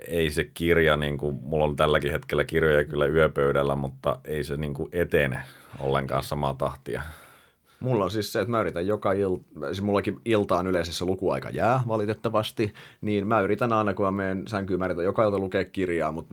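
Nothing technically wrong turns up anywhere in this speech recording, so there are no times or causes to point to.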